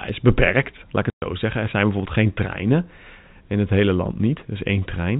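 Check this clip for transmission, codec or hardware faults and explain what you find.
One transmission fault stands out: packet loss filled with silence, from 1.10 to 1.22 s, just after "is beperkt laat ik". For 120 ms the receiver had no data and played zeros, so the speech is cut by a dead hole with hard edges. A 120 ms gap fits a run of six 20 ms packets. On the waveform it is a flat line with abrupt cliffs at both ends. On the spectrogram it is a blank vertical stripe with sharp edges. The G.711 telephone coding limits the audio to below 4 kHz.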